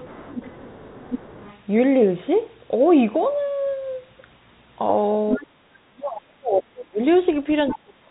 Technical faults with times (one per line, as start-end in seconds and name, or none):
0.00-1.59 other side's voice leaking through
5.31-5.44 other side's voice leaking through
5.36-6.99 speech suppressed in double talk
7.68-7.76 other side's voice leaking through
7.70-8.10 speech suppressed in double talk